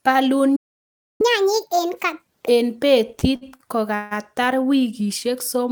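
At 0.56 s the speech cuts out into silence for about 0.64 s, resuming at 1.21 s. This is a playback stall, likely from the player running short of data or its output thread being blocked until it could continue.

From 1.21 s to 2.48 s the speech runs fast and sounds raised, roughly seven semitones higher, before settling back to normal. This is catch-up at higher speed: the player resamples its backlog at 1.5 times normal rate to recover the time lost in the stall.

Between 3.19 s and 4.13 s the speech drags and stutters, with sounds briefly held and stretched in four places, the longest about 159 ms. These are repeated stalls (stutter): late packets emptied the jitter buffer each time, so the receiver extended the last sound, about 278 ms in total and roughly 30% of that stretch, while nothing was actually lost.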